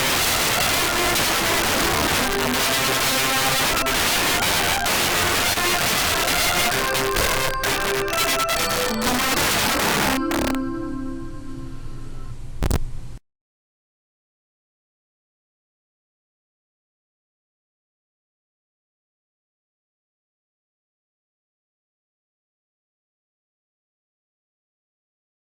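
From 0.00 to 10.55 s the audio suffers integer overflow. Peaks were pushed about 12 dB past the integer ceiling, and instead of being limited they wrapped around to the opposite extreme of the range. Every loud moment in this stretch produces a violent crack, far harsher than ordinary clipping, because the waveform jumps full-scale from one polarity to the other rather than flattening.

At 5.53 to 5.58 s, inside that overflowing stretch, there is a short concealed packet loss. About 20 ms of audio failed to reach the decoder in time, and the receiver bridged the gap with roughly 23 ms of synthesised continuation, extending the preceding sound and then crossfading back into the real signal. It is heard as a brief smear or wobble.

Integer overflow returns from 12.63 to 12.76 s, this time with about 4 dB of overdrive. The wrap-around is the same, but the shorter span and lower excess confine it to a quick burst of sharp cracks on the loudest peaks.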